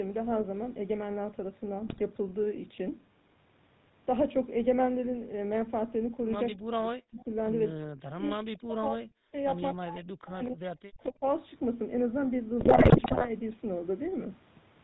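Throughout, the speech carries the buzzy, gravelly roughness of the GSM full-rate codec, consistent with its 13 kbps coding. The spectrogram shows nothing above 4 kHz and smeared, pulse-driven harmonics. The coarse excitation shows up as grainy texture rather than clean voicing.

From 1.87 to 2.01 s, GSM bit errors corrupt a few decoder frames, producing a short squawk and pop. The waveform shows abrupt level spikes, and the spectrogram shows frame-wide smears where the decoder values were garbled.

Between 6.53 and 11.24 s the speech repeatedly dips and breaks apart at 6.53–7.3 s, 7.75–9.34 s, 9.74–10.63 s and 10.87–11.24 s. This is likely speech suppressed in double talk, with the echo canceller ducking the talker while the far side spoke. The waveform shows deep gaps of around 40 dB, and the spectrogram shows the speech thinning out in patches.

From 12.6 to 13.29 s, GSM bit errors return over a longer stretch, with gargling and repeated squawks. 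On the waveform, the level jumps erratically from frame to frame. The spectrogram shows a run of distorted, blocky frames whose spectral shape bends unpredictably.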